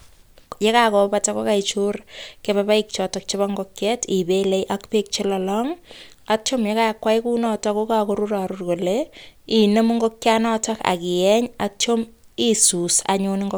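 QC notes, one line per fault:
No fault to note.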